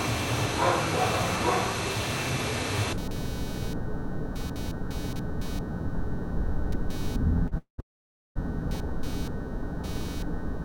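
Load swings in the computer's processor, graphics or mouse disturb the shared audio ground, producing computer activity noise throughout: a buzzing, chirping texture pulsing at roughly 300 Hz, about 20 dB below the sound, rising and falling with machine activity rather than the audio.

At 7.47 to 7.54 s a packet arrived late and the jitter buffer ran dry, giving a short stall from a late packet. The receiver held the last sound for about 42 ms, so it lingers with a faint buzz or dip before resuming.

Packets were likely delayed in transit, causing a call audio freeze from 7.58 to 7.80 s and again from 7.80 to 8.37 s. In each, the held sound fades to silence, about 100 ms the first time and 520 ms the second, then continues where it stopped.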